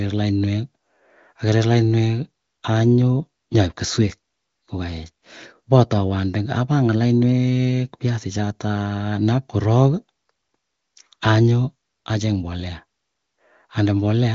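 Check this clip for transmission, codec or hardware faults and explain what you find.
No transmission, codec or hardware faults found; the speech band stops near 7.5 kHz and the coding sounds consistent with AMR wideband (HD Voice) at its top 23.05 kbit/s mode.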